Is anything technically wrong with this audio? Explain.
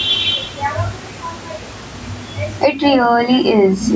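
Yes. Throughout the speech there is gain pumping: the gain swings around 15 dB, likely from excessive mic gain driving a fast limiter.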